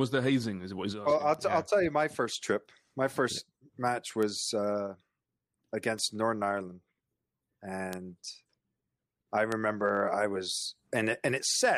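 At 1.34 s, just after "well I'll", then at 4.23, 5.99, 7.93 and 9.52 s, a bit error spike jumps one to three samples to about -22 or -16 dBFS. Each is a sharp tick: a waveform needle, a full-height spectrogram line.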